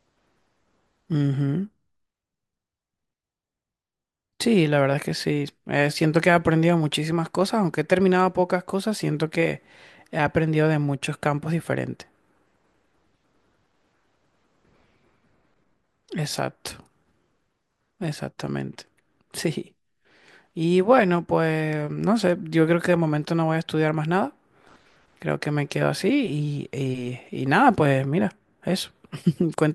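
No technical faults can be heard anywhere in this speech recording.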